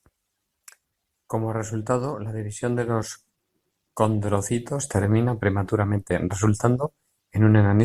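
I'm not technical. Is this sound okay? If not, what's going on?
Yes, this speech recording sounds fine, and nothing in it jumps out as a problem.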